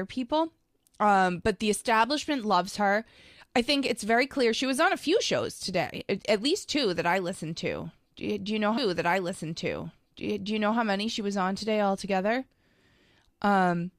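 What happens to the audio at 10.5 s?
At 10.5 s the speech is inside a stream segment repeated, running from 8.77 to 10.77 s. After "you do you know", the player jumps back with a small blip and replays two seconds it has already delivered, as if it fetched or queued the same segment twice, before continuing into "many she was on". Unlike a buffer stutter, which loops a tiny fragment, this is an exact replay of a whole two-second stretch.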